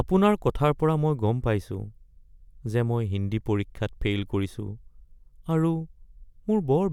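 Nothing here trips up the ear at all: the speech runs along with no dropouts, glitches or distortion anywhere to point to.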